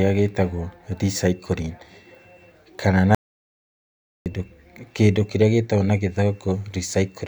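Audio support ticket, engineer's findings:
Audio dropout to silence, 3.15 s to 4.26 s, directly after "kana na". Speech cuts off mid-flow and the gap is silent, with no room tone. About 1.11 s of content lost and not recoverable. Probable component: input path upstream of the recorder. Mechanism: source signal interrupted, likely by a momentary disconnect or accidental mute, while the recorder kept writing silence. Speech resumes abruptly at 4.26 s.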